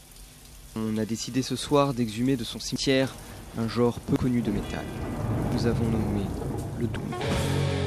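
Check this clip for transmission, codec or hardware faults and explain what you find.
Three short skips point to dropped buffers (overrun). At 2.76 s, 4.16 s and 5.52 s, samples were likely overwritten before the program read them, so roughly 70 ms, then about 40 ms twice, simply vanish. At each joint the sound jumps forward without any silence.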